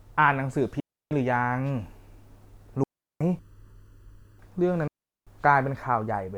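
A speech recording carries two kinds of fault. Three digital wireless dropouts occur where the radio link lost too much data and the receiver muted with a very short fade: 0.80 to 1.11 s (about 310 ms), 2.84 to 3.21 s (about 370 ms), and 4.88 to 5.27 s (about 390 ms). Each is a clean hole of near silence that cuts straight into the speech, with no crackle or noise burst on either side. Separately, from 3.39 to 4.39 s, one channel runs late by under a millisecond, and when the two channels are summed to mono the shared content cancels at evenly spaced frequencies. This channel delay (comb filtering) puts the first notch near 700 Hz, with further notches repeating up the spectrum, so the voice turns hollow and phasey for that second.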